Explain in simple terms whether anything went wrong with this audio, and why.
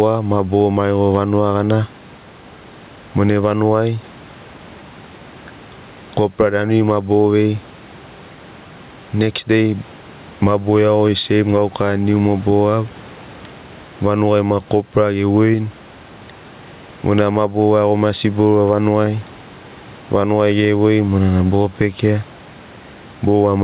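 Gain pumping, throughout the clip: loud and soft parts end up closer in level and the sound is squashed, likely from too-high gain clamped down by a fast limiter.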